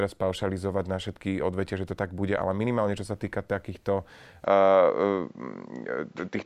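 Speech whose sound turns duller from 4.44 s to the end, with nothing above 7.6 kHz, a level shift of about 5 dB and a new faint noise floor. The input likely switched to a poorer device; a mere filter change wouldn't bring different noise and level.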